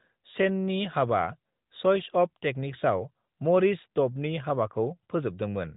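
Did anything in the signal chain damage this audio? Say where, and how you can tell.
No, nothing in the chain has damaged this speech; the band stops near 3.8 kHz, as expected from an AMR narrowband mobile codec path whose light coding texture fits its top 12.2 kbps mode.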